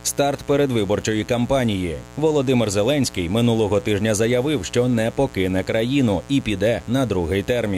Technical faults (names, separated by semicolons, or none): mains buzz